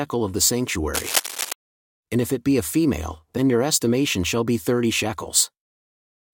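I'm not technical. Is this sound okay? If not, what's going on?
No. A worn cable or connector was likely moved while recording, making its electrical contact flicker on and off. From 0.94 to 1.53 seconds this cable scratch noise adds a rough scratching, rustling burst over the speech, nearly as loud as the speech itself.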